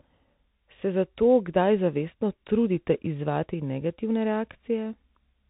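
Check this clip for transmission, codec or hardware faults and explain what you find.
There's one fault, running the whole way through: the speech has gone through a Bluetooth CVSD headset codec. Everything above about 3.8 kHz is gone. The one-bit up-or-down encoding, which fits a 64 kbps stream, can't keep pace with sharp changes, so s sounds turn scratchy over a grainy hiss.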